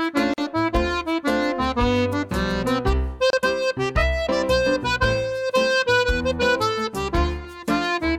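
At 0.34 s and 3.30 s, the sound drops out for about 43 ms and 29 ms. These are gaps at a join of encoded pieces: untrimmed encoder delay and padding leave silence. It then resumes.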